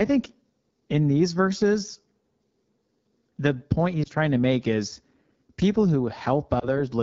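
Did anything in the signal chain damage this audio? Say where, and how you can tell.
Yes, at the codec stage. Throughout the speech the sound is rough and raspy, with a hissy, noise-like top band instead of real high-frequency detail. That is the AMR wideband (HD Voice) codec at a low rate, which fits its 8.85 kbit/s mode: the vocal tract model and pulse excitation are starved of bits, and the region above 6.4 kHz is synthesised noise. Unlike a narrowband codec, the band still reaches about 7 kHz. Unlike analogue hiss, the roughness follows the speech.

Lost AMR speech frames occurred on the radio link, at 4.04 to 4.08 s between "the point" and "trying to make is", and again at 6.59 to 6.80 s. Each sounds like a single missing 20 ms frame. Instead of cutting out, the sound briefly smears and warbles as the decoder reuses the previous pitch and vocal tract settings at falling gain, then recovers slightly weak and rough. 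That smooth concealment, with no click or hard gap, separates it from a buffer dropout.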